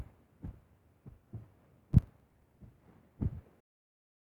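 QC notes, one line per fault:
1.93–2.57 s, processor overload crackle: a gritty burst of crackle rides on the sound as the processor misses buffer deadlines repeatedly. Missed buffers are skipped, leaving hard-edged gaps. The spacing suggests buffers of roughly 10 ms, with around fifteen missed before the load eases.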